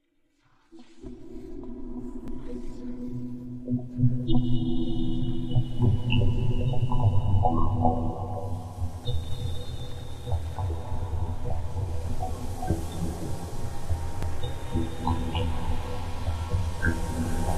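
Overlap between stream segments at 2.28–2.31 s, 10.24–10.28 s and 14.23–14.25 s in this recording of sounds: overlapping 4-second segment timestamps cause roughly 30 ms of real audio to be discarded, leaving small clicks or skips.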